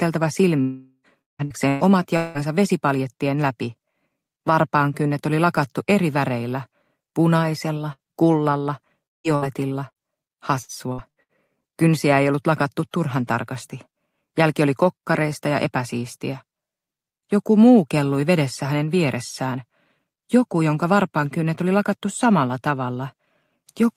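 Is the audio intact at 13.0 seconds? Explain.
Yes, at 13.0 seconds the audio runs cleanly with no dropout, click, distortion or other fault.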